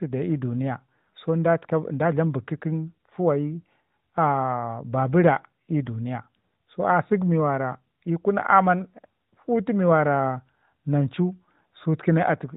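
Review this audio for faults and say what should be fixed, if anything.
Nothing stood out on listening to this speech, so there is nothing here that needs fixing.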